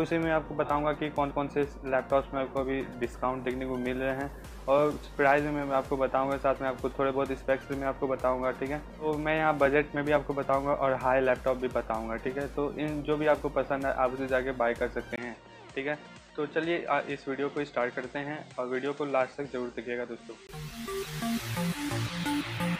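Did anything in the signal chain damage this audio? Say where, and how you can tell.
Yes, at the driver: the input likely switched to a poorer device from 15.16 to 20.49 s, after a 20 ms gap; everything above 8.7 kHz vanishes, with faint hiss.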